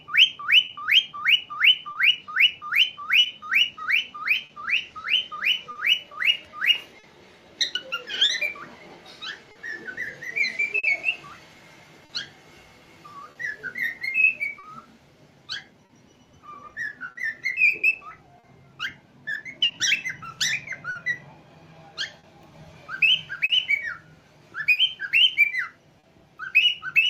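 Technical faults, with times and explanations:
Throughout: clock drift between sender and receiver. The sending clock runs roughly 3 percent slower than the receiving one, so the jitter buffer keeps draining. To stay in step, the receiver keeps stretching or repeating short slices of audio and now and then runs briefly dry. The result is a string of small timing stumbles at uneven intervals across the whole clip, each a slight drag or hitch in the sound's flow.
0.65 to 26.05 s: scattered short gaps. About twenty isolated packets went missing or arrived too late across this span, none longer than roughly 40 ms. Each hole was papered over by extending the last piece of sound received, which adds up to around a second of patched audio, only a few percent of the stretch. Each patch is heard as a brief tick, smear or hiccup in otherwise continuous sound.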